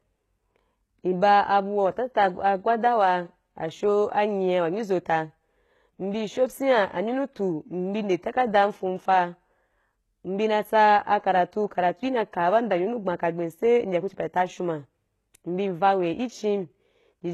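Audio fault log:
Throughout: HE-AAC compression, likely; treble above the coded band is rebuilt from copied lower bands, so sibilants sound gritty and metallic, unlike a plain low-pass, with nothing above 12.3 kHz and a low-bitrate sound that fits about 16 kbps.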